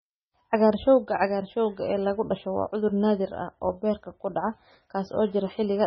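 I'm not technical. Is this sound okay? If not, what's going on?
No. MP3 compression damage runs through the whole clip, likely from very heavy squeezing. Everything above about 5.9 kHz is gone, so the speech sounds dull, and quiet detail flickers in and out, leaving a watery, swirly texture with metallic chirps on s sounds.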